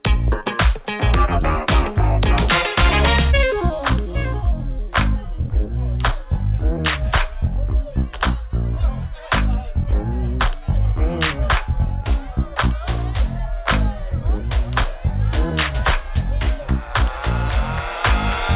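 No faults found; the audio has nothing above 4 kHz, as expected of a narrowband call path consistent with G.711 mu-law coding.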